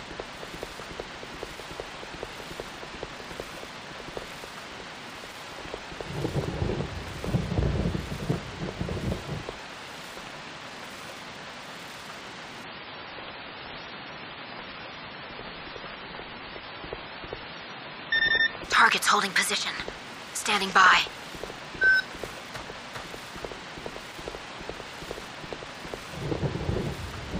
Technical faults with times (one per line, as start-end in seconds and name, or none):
12.64-18.64 adaptive stream at a lower bitrate